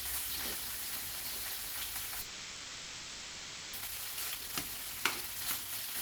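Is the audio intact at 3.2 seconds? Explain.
No. At 3.2 s the audio is inside a long network dropout running from 2.21 s to 3.77 s, most likely caused by a break in packet delivery. For that 1.54 s the receiver has no real audio to play, so it synthesises a fill by extending the last sound it received, which is heard as a smeared, buzzy continuation. About 0.94 s of the original sound never plays. When audio resumes at 3.77 s, it arrives roughly half a second later than before.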